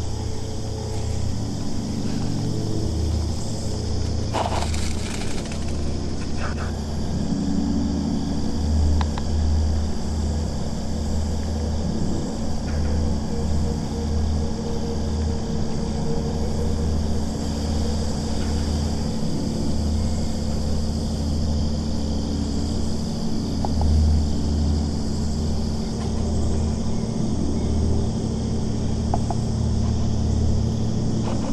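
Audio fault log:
throughout: doubled audio track. A full-band copy trails about 150 ms behind, roughly 5 dB quieter, without decay. Likely a second capture path or misaligned edit.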